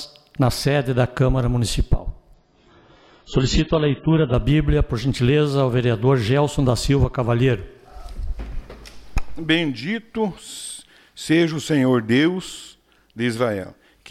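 An adaptive stream at a lower bitrate runs from 2.34 to 4.34 s: quality drops abruptly without a gap, nothing above 7.5 kHz survives, and artefacts rise, consistent with a much lower AAC bitrate.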